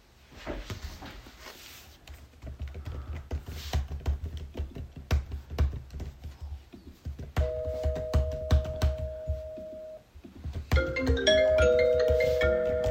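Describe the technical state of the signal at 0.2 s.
At 0.2 s the signal is intact, with no audible fault at that moment.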